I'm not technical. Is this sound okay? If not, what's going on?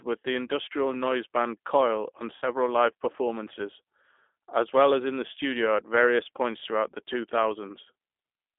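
No. The speech went through a G.729 codec, a phone-call system that squeezes the voice into very little data by rebuilding it from a rough model of how a voice is shaped. Everything above about 3.6 kHz is cut, and much of the bottom is thinned too. The whole clip sounds boxy, like an old phone line, and the squeezing leaves a plainly rough, slightly artificial edge on the voice.

There are also two moments of VoIP packet loss concealed by the speech codec. Small pieces of the call went missing in transit, so the receiving end guessed and filled the gaps by stretching the sound it had just heard. The first gap, at about 0.47 s, falls between "with the" and "noise band" and is barely a blink long. The second, from 2.36 to 2.45 s, just before "live performances", is longer, so a brief buzzy or noisy smear that fades replaces the real sound there.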